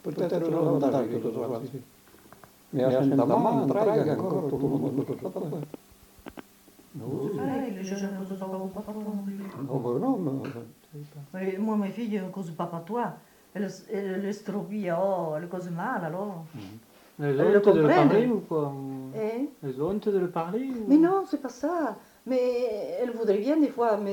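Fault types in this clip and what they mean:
Doubled audio track: a second, full-band copy of the sound runs roughly a tenth of a second behind the first and at about the same loudness, most likely from a slower second capture path mixed back in. It is already present when the clip begins and cuts off abruptly at 9.5 s. Unlike reverb or a room echo, the copy has no decay tail or room colouring, and it arrives once rather than as a series of fading repeats.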